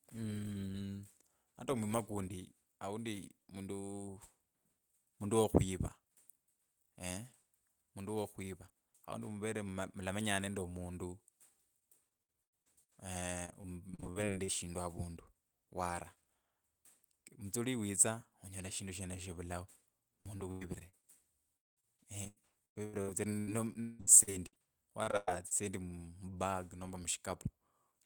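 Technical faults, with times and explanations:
11.79–12.94 s: repeated packet loss (robotic sound). Packets kept dropping and each hole was patched by extending the last sound, about a quarter of this stretch, giving choppy, robotic speech.
13.46–14.50 s: repeated packet loss (robotic sound). Short, frequent losses, none longer than 36 ms, were concealed by repeating prior audio, leaving a choppy, robotic quality.
20.21–21.05 s: repeated packet loss (robotic sound). A handful of losses, the longest 97 ms, were filled with stretched earlier sound, so pieces vanish behind a robotic smear.
21.57–24.60 s: repeated packet loss (robotic sound). Sustained loss, with gaps up to 198 ms and about a third of the span concealed, makes the speech choppy and mechanical.
25.03–25.53 s: repeated packet loss (robotic sound). Several losses, one about 105 ms, were bridged by continuing the last sound over about 40% of this stretch, giving a robotic, broken result.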